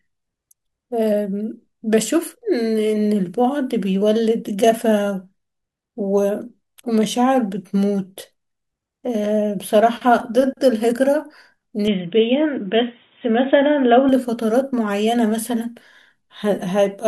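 Input switched to a poorer device, from 11.88 to 14.09 s: the speech abruptly loses everything above 3.8 kHz, turning dull and boxy, then opens back up at the end of that span. There is no gap at either transition and loudness stays about the same, but a faint new background noise sits well beneath the speech. The likely cause is the system changing its input mid-recording to a narrower-band microphone or headset profile, then switching back.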